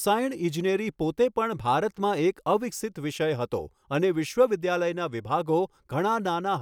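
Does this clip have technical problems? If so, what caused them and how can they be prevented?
No, the recording carries its signal steadily throughout, with no audible technical faults to trace or prevent.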